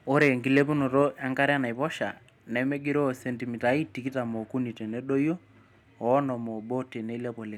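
The input gain was likely set too high for the microphone, so peaks overran the converter: from 0.21 to 0.28 s by about 4 dB, and from 0.57 to 0.60 s by about 2 dB. This microphone overload flattens a few percent of samples, adding a harsh, crackling edge.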